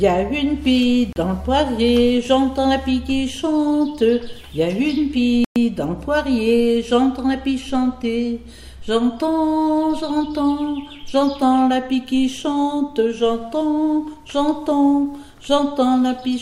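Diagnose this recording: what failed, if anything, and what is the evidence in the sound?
The audio drops to dead silence twice and then resumes: for about 34 ms from 1.13 s to 1.16 s, and for about 114 ms from 5.45 s to 5.56 s. Neither gap has a fade. These are likely Bluetooth stalls at the wireless playback stage. Interference delayed packets on the link, the receiver's buffer emptied, and output halted until retransmitted data arrived. Playback then continued.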